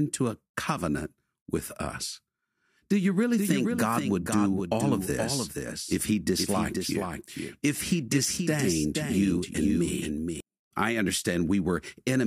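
From 3.38 to 10.40 s the speech is a doubled audio track. A second copy follows about half a second behind, somewhat quieter. It likely comes from a slower capture path.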